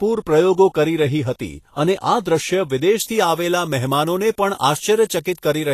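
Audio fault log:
throughout: Vorbis compression, likely the cause of what is heard here. The codec damage is plainly audible. The treble sounds hissy and grainy, and attacks are blurred. Nothing is left above 14.2 kHz, so the codec cut the top band off. Below that, the upper detail was quantised so coarsely that it turned into noise of similar energy. The amount of damage fits a low bitrate near 37 kbps.
3.00 to 5.74 s: pre-emphasis left on. From 3.00 s to the end, the speech turns thin, bright and sibilant. A treble boost was applied before storage or transmission, and the matching cut never followed. High frequencies sit about 10 dB above their proper level at 10 kHz, relative to 1 kHz. The shape of the lift fits a 50 µs FM pre-emphasis curve.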